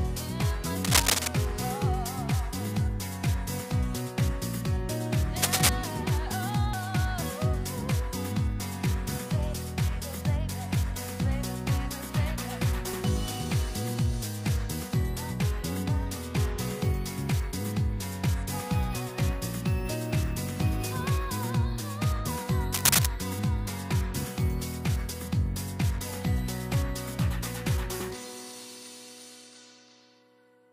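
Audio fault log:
0.84–1.28 s, 5.42–5.69 s and 22.74–23.06 s: cable scratch noise. Dense, uneven rustling bursts sit about 5 dB above the sound, likely from a worn cable or connector being moved. On a spectrogram they appear as ragged broadband smears, and the waveform shows spiky, irregular fuzz.
6.73 s, 12.93 s, 25.98 s and 28.00 s: dropped buffer (overrun). Each is a sudden jump forward. Roughly 70 ms, 50 ms, 20 ms and 20 ms of audio vanish, likely overwritten before capture. The waveform shows a hard discontinuity with no gap, and the spectrogram shows a thin vertical line.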